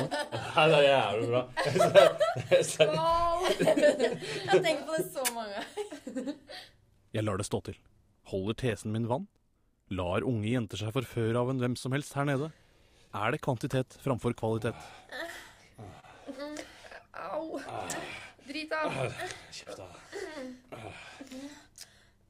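Clock drift between sender and receiver runs throughout. The sender's clock is roughly one and a half percent slow, so the receiver's buffer keeps draining rather than overflowing.

From 1.27 to 21.70 s, repeated timing corrections stretch the audio to 99% speed, adding around 150 ms in total. These are small repeats, all lengthening, heard, if at all, as a slightly uneven tempo rather than as dropouts.

Scattered short gaps come between 7.25 and 8.73 s, about three of them, each only around 10 ms. More follow from 13.08 to 21.85 s, about seven, the longest around 30 ms. Each hole is filled by continuing the last sound, so it comes through as a brief tick or smear, not silence. The gaps are isolated, unlike the ongoing, same-direction drift corrections.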